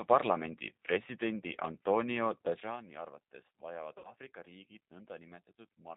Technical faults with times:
0.00-5.96 G.729 codec
3.98-4.13 VoIP packet loss concealed by the speech codec

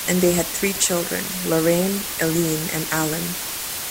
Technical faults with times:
0.00-3.90 low bit depth with dither

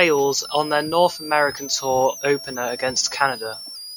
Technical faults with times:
0.00-3.97 switching supply whistle

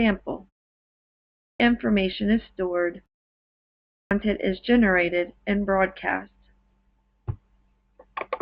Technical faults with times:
1.22-1.60 clipped start after a pause
3.75-4.11 clipped start after a pause

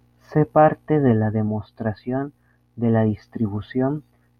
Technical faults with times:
none

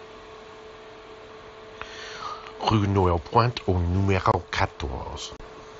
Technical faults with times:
4.32-4.34 unconcealed Bluetooth headset packet loss
5.37-5.40 unconcealed Bluetooth headset packet loss

